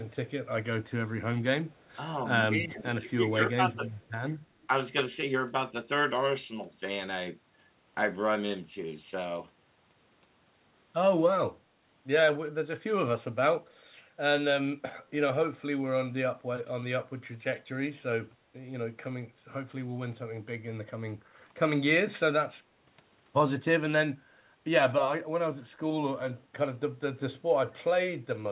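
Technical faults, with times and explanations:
1.7–1.95 s, 3.07–3.11 s and 3.88–4.12 s, echo leak: faint delayed copies of the speech trail the talker by 214 ms, sitting about 35 to 40 dB down. These are likely the far end's loudspeaker feeding its microphone, with the echo canceller letting a bit slip back through.
2.64–2.83 s and 3.14–3.2 s, speech suppressed in double talk: the voice briefly sinks, by about 15 dB in the first dip and about 20 dB in the second, for roughly 200 ms and 70 ms. That's likely the echo canceller mistaking overlapping talk for echo and ducking both.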